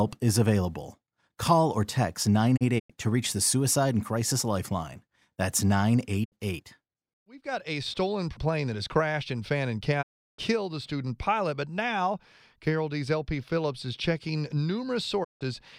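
Digital broadcast dropouts cut the speech four times. The receiver lost valid frames and muted, fading out over about 20 ms. From 2.56 to 2.92 s, after "or text", short holes scatter before "to reach the". Further gaps follow at 6.24 to 6.34 s, at 10.01 to 10.40 s before "a student pilot but", and at 15.23 to 15.43 s. The lost stretches come in multiples of 32 ms, which fits 32 ms frames. The missing sound never returns.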